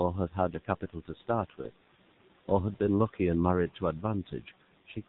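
A speech recording carried throughout by the G.723.1 codec at a rate that sounds like about 6.3 kbit/s. Its 30 ms frames and narrow band strip everything above 4 kHz and smear fast changes, so the voice is heavily muffled and hoarse, with blurred consonants over a room noise about 24 dB down. From 1.61 to 1.69 s, VoIP packet loss concealed by the speech codec fits one lost 30 ms frame. The decoder stretches the preceding sound into a fading tail that stays weakened briefly after the stream resumes.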